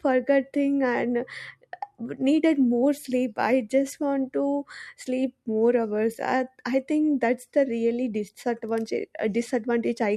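Speech recording with no technical faults to report.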